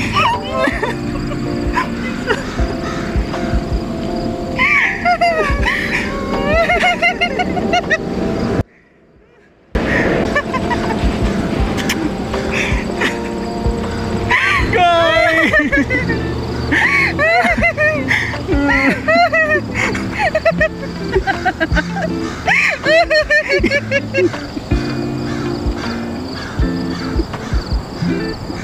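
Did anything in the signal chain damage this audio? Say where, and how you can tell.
Yes. From 8.61 to 9.75 s the sound cuts abruptly to a faint residue, roughly 35 dB below normal, then snaps back. This audio dropout to a faint residue likely comes from a brief break in the analogue wiring, while later stages stayed live and passed only leakage.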